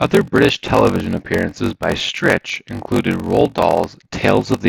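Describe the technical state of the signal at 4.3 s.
At 4.3 s the speech is affected by a block size mismatch (padded), present across the whole clip. Each block the next stage reads, consistent with 1024 samples, arrives only partly filled, and the remainder is zeros. The result is a buzz at 46.9 Hz and speech running at 0.861 times normal speed with roughly unchanged timbre. The waveform shows short near-silent gaps repeating every 21 ms, and a spectrogram shows evenly spaced vertical stripes.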